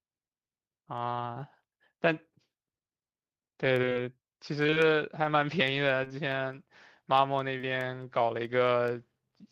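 Repeated packet loss (robotic sound) strikes twice, from 3.81 to 3.97 s and again from 4.63 to 4.78 s. In each stretch four separate gaps open in quick succession, none longer than about 24 ms. The receiver covers each hole by extending the last stretch of speech. Because the gaps keep coming, close to half of each span is this stand-in audio, so the speech turns choppy and mechanical, with fragments missing between the patches.

Short concealed packet loss follows at 6.04 to 6.12 s and at 7.58 to 7.65 s. Each is two adjacent 20 ms losses back to back. The decoder bridges each pair by continuing the preceding sound, following its pitch where the speech was voiced and using shaped noise where it was not, then blends back into the real signal. The result is a brief smear or wobble, and a quick consonant in the gap may drop out.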